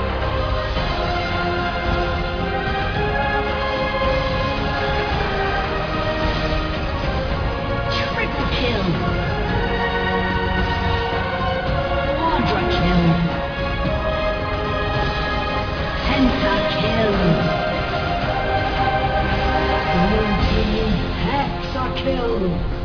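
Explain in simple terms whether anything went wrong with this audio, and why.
Nothing went wrong here: there are no dropouts, clicks, glitches or other problems to point to anywhere in the recording, so it can be enjoyed just as it is.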